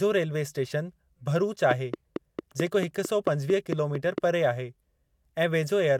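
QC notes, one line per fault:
1.71–4.19 s, train of clicks: just after "रेल्वे इस्टेशन भरूच", about ten near-identical clicks arrive at a steady 4.5 per second, peaking roughly 15 dB above the speech. Their even spacing and matching shape, unlike random crackle, point to likely interference from nearby equipment.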